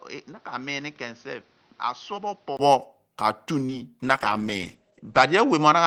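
From the start to 2.59 s, the speech is dull and boxy. Nothing reaches above 6.4 kHz. It sits roughly 10 dB quieter than later. A background noise runs underneath, only about 30 dB below the speech. At 2.59 s there is a 20 ms gap, and then the full, clearer sound returns. This is an input switched to a poorer device, likely a second microphone or a headset's call profile, with its narrower band, own tone and noise.

From 3.66 to 3.70 s comes a short concealed packet loss. About 20 ms of audio never arrived in time. The receiver covered the hole by extending the sound just before it, generating about 23 ms of fill. It then blended back into the real signal. The result is a brief smear. It lasts only a few hundredths of a second, but the moment sounds blurred rather than crisp.

From 4.04 s to the end there is a call bitrate drop. The speech turns rough and watery, and the top end falls away. 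Bandwidth shrinks from 20 kHz to 8 kHz, so it sounds muffled. The coarseness fits the encoder falling from about 32 kbps to 10 kbps. The worst stretch lasts 1.17 s, where the texture is at its most grainy, and there is no recovery before the clip ends.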